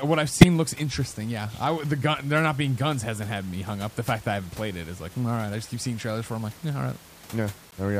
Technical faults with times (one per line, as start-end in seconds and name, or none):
0.41-0.47 corrupt frame decoded
7.71-7.74 corrupt frame decoded